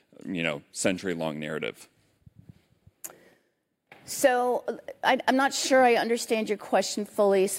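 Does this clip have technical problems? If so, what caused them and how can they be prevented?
No, nothing in this speech recording stands out as a technical problem, so there's nothing here that needs fixing or preventing.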